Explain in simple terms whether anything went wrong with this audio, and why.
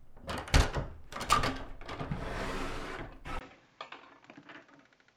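Input switched to a poorer device, at 3.39 s and lasting to the end at 5.16 s. There's a brief gap of about 20 ms, and then the sound turns duller and a little quieter, with a faint new background noise. The likely cause is the recording moving from one microphone to a weaker one, such as a headset. That device can't capture the brightest sounds above 7.6 kHz, so the crisp top end vanishes from that point on.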